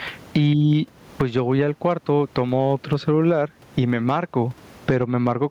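Gain pumping runs through the whole speech recording. The gain swings by around 20 dB, leaving the level squashed. The likely cause is microphone gain set far too high, with a fast limiter clamping each peak.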